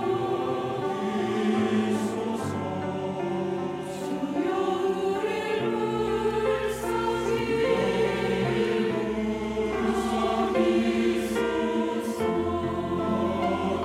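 Nothing stood out as a technical fault on listening.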